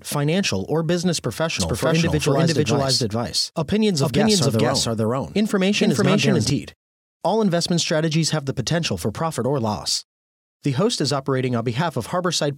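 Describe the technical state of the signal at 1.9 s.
The speech is likely captured a second time by a slower path and mixed back in, producing a doubled audio track from 1.60 to 6.50 s. A dry, full-band copy trails roughly half a second behind at similar loudness, starting and stopping abruptly.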